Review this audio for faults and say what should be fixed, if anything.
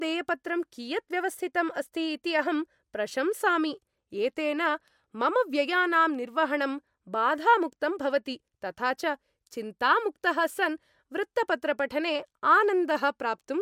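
Nothing in this speech recording needs fixing. No faults can be heard anywhere in it, so there is nothing to prevent.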